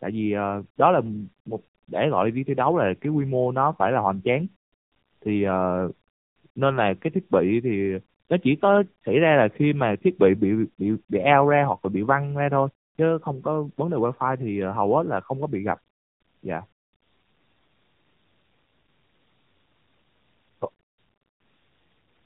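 Tandem speech coding runs throughout: the speech passed through two narrowband coders in a row, consistent with AMR-NB on either side of a G.711 link. The second coder reworks the first's damage, so the sound is rough, warbly and muffled, with nothing above 3.7 kHz.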